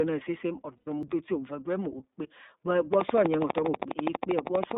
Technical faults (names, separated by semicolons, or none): iLBC codec; lost iLBC frames; CD skip; train of clicks